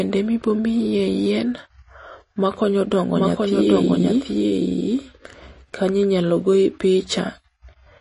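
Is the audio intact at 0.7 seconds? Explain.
No. At 0.7 seconds the speech carries MP3 compression damage, which runs through the whole clip. The treble stops dead near 10.6 kHz. The codec damage is plainly audible, which fits a low bitrate around 32 kbps. Short of bits, the encoder likely dropped the highest frequencies and zeroed weak frequency lines. Those lines flicker on and off between frames. The result is a watery, swirly texture, with metallic chirps on s sounds.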